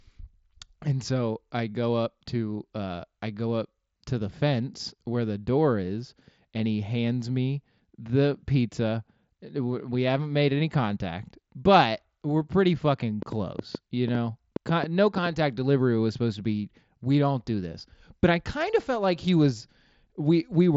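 A train of clicks runs from 13.22 to 15.27 s, starting just after "but we're pretty fucking" and ending before "delivery was supposed to". About ten short, similar pulses arrive at roughly 4.9 per second but with uneven spacing, peaking about 10 dB above the speech and cutting through the wideband Bluetooth sound that stops near 7.7 kHz. The likely source is interference or a faltering interface repeatedly injecting a pulse, heard as ticking over the voice.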